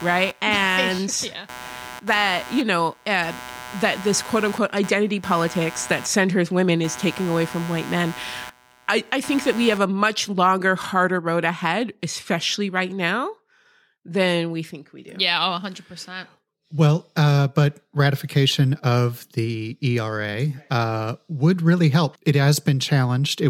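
A speech clip with computer activity noise from the start to 9.78 s, ending just before "a much longer harder." A buzzing, chirping layer, pulsing at around 150 Hz and roughly 15 dB below the speech, shifts in ways unrelated to the talking. Processor or graphics load changes disturb the ground shared with the audio circuit. A spectrogram shows fine vertical striations and bursty broadband texture that stop abruptly at 9.78 s. The waveform shows a spiky, raised floor between phrases.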